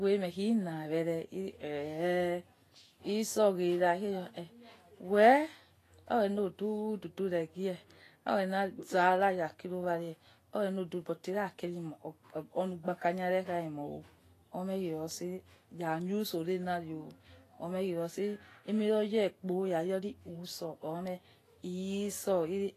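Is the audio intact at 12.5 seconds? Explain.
No. The speech at 12.5 seconds carries the same damage heard throughout. It is grainy and hissy, with nothing above 14.2 kHz. This is likely Vorbis compression at a low rate, near 33 kbps. Coarsely quantised treble turns fine detail into noise.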